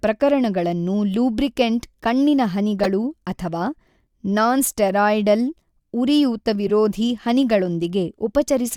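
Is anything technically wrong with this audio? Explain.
Yes. Corrupt frame decoded at 2.83 to 2.88 s, just after "ಪ್ರಕರಣಗಳನ್ನು ಲೂಬ್ರಿಕೆಂಟ್ ಕಣ್ಣಿನ", at 4.88 s, and at 6.67 to 6.70 s. Damaged compressed frames were played anyway, scattering energy into wrong frequencies. The result is sharp blips, the first loudest, near -5 dBFS, spanning about two frames for the first and three for each of the others.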